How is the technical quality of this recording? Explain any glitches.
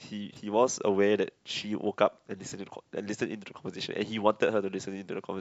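The speech carries two brief stutters, at 0.34–0.36 s and 2.50–2.52 s. Each is a repeated buffer: fresh audio arrived late, so the device replayed its last 21.33 ms block once, which fits a 1024-sample buffer. The hard joins make a quick click-like hiccup, and roughly 20 ms of audio goes missing each time.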